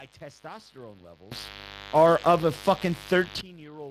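A raspy mains buzz runs through the whole clip. Its pitch sits on 50 Hz mains, with a dense stack of harmonics climbing into the kilohertz range. That points to sharp switching spikes leaking in. It sits only roughly 15 dB below the speech.

The Speex codec damage is also present throughout and plainly audible. The speech sounds hoarse and grainy. The excitation is starved of bits. Nothing remains above 15.4 kHz, and the upper band is a noisy fill. This fits a rate near 22 kbps.

At 1.32 s there is a sudden gain jump of 21 dB. Speech and buzz leap up together with no ramp. The level holds until 3.41 s, then drops back. The likely cause is a digital gain step applied without smoothing.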